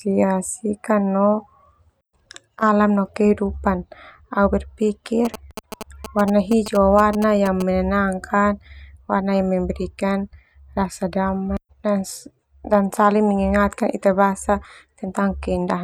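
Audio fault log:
5.25 to 7.62 s, GSM signalling bursts: a galloping dit-dit-dit of short buzzes at 216.7 Hz, sitting around 10 dB below the speech. A nearby 2G phone exchanging brief radio bursts with the network is being picked up and rectified by the audio circuitry. Unlike steady mains hum, this buzz stops and starts in irregular groups. It also lacks the unbroken drone of a phone in active transmission, and it ends after about 2.4 s.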